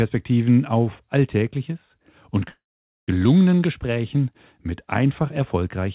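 Speech run through a call path, and it picks up a loudspeaker feedback squeal at 1.04 s: a 4 kHz tone swells over roughly a second and a half until it sits about 15 dB above the speech, then cuts off at 4.41 s. That means the mic was hearing its own speaker with loop gain over one at that pitch. Inside it there's a call audio freeze from 2.49 to 3.09 s. The last sound smears into a fading buzz or hiss, then about 480 ms of silence, and the speech picks up right where it stopped, so nothing's lost but a 0.59 s gap is added. That's likely packets stalling and the jitter buffer running dry. The narrow call bandwidth, with nothing above 4 kHz, is expected for a G.711-style link.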